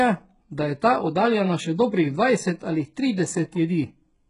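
From start to finish, the treble sounds synthetic and gritty. S sounds come out metallic and lispy, and nothing survives above 11.1 kHz. This is likely HE-AAC compression, rebuilding the top band from copied lower bands, with heavy damage that fits a very low bitrate near 12 kbps.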